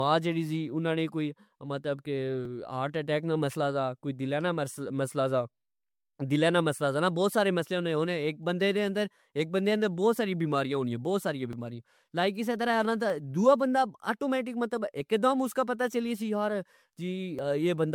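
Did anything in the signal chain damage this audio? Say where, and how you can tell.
Yes. At the codec stage, the speech sounds swirly, hollow and smeared, with blurred attacks throughout, likely generation loss from about four MP3 passes near 96 kbit/s.

At the driver or buffer stage, small forward jumps occur at 2.45, 11.53 and 17.39 s, each skipping roughly 10 to 20 ms, likely a dropped buffer (overrun).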